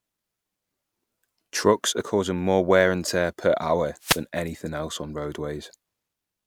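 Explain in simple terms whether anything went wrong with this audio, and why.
Something did go wrong, briefly. From 4.00 to 4.23 s, about a quarter of a second, the speech is hit by a short swish of static. That is a wireless microphone noise hit. The microphone sends its sound over radio, and for a moment reflected radio signals cancelled the direct one. The signal faded, and the receiver's own hiss briefly rose up before the signal recovered.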